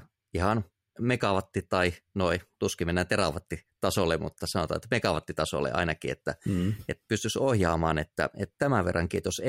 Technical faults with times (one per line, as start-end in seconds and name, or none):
none